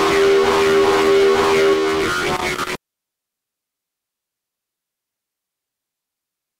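From about 2.36 to 3.26 s there's a burst of loose connector crackle: a worn or dirty contact somewhere in the chain keeps making and breaking, so the sound gets chopped up. It comes across as irregular scratchy crackling, just under a second long.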